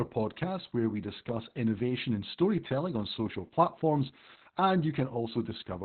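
From start to finish the speech sounds muffled, hoarse and slightly robotic, with nothing above about 4.3 kHz. That is Opus voice compression working hard: the SILK coder squeezed to narrowband at a rate that fits about 8 kbps, coding the excitation coarsely and stripping the upper band.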